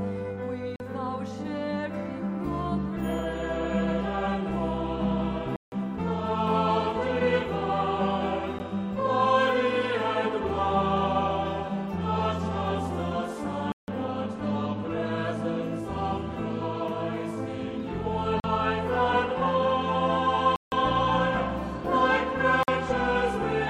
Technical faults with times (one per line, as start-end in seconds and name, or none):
0.76-0.80 block of digital silence
5.56-5.72 block of digital silence
8.59 block of digital silence
13.72-13.88 block of digital silence
18.40-18.44 block of digital silence
20.56-20.72 block of digital silence
22.63-22.68 block of digital silence